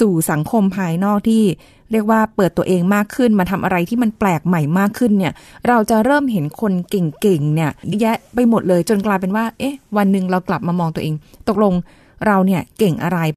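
Damaged data in the compressed stream hits the speech at 7.91 s. A short stretch of the encoded bitstream is corrupt, so the decoder cannot make sense of the frames there. It loses synchronisation and has to hunt for the next valid frame header before normal decoding resumes. The result is a brief, unnatural chirp or blip, lasting under 20 ms, that cuts across the speech and does not belong to it.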